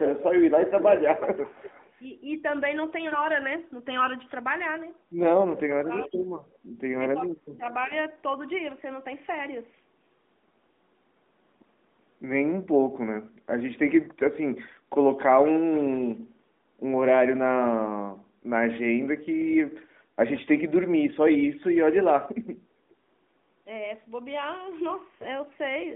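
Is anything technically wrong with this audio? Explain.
Yes, there are three kinds of fault, heard over a narrowband mobile line whose 200 Hz to 3.6 kHz band carries little codec damage.

Echo leak at 0.04–0.24, 0.64–1.99, 6.00–6.06, 6.38–6.56 and 7.64–7.68 s. A speakerphone's canceller likely let through a copy, about 10 to 35 dB down. Unlike reverb, the copy trails a fixed 340–355 ms behind.

Speech suppressed in double talk at 5.54–6.27 and 7.19–7.63 s. Overlapping talk likely confused the canceller, dropping the voice about 25 to 30 dB. It is a gap, not an added copy.

AMR bit errors at 25.20–25.27 s. Flipped codec bits made the voice gargly and scratchy while pitch and level held, unlike a dropout's silence.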